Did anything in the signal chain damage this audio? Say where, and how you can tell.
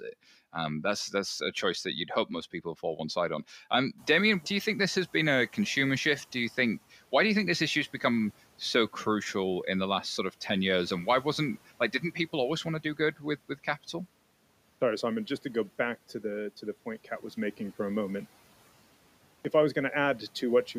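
Yes. Call processing: noise suppressor catching up. Room noise jumps by about 17 dB near 4.0 s, passes through under-reduced, and only drops by about 9 dB around 6.69 s, after 2.7 s.

Playback: clipped start after a pause. At 14.77 s and 19.41 s, sound resumes abruptly after silences of 0.72 s and 1.16 s, each missing about 38 ms as the output device wakes.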